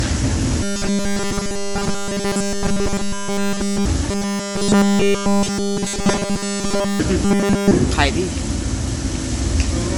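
Throughout, a likely MP3 compression at a low bitrate, around 48 kbps, leaves plainly audible watery, swirling artefacts. From 0.63 to 3.86 s, 4.11 to 7.00 s and 7.25 to 7.71 s, robotic sound from repeated short buffers, likely from audio arriving too seldom, loops nearly every 5 ms slice and imposes a rigid, metallic 200 Hz buzz.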